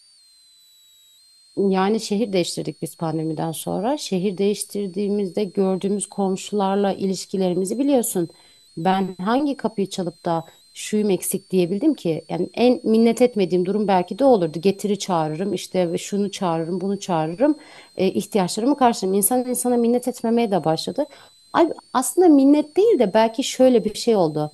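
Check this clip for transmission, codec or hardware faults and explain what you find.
One hardware fault runs through the whole speech recording. Switching supply whistle: a power supply in audible burst mode adds a faint high whistle, roughly 35 dB down, wandering between 3.8 and 4.7 kHz around 4 kHz. On a spectrogram it is a thin, drifting horizontal line.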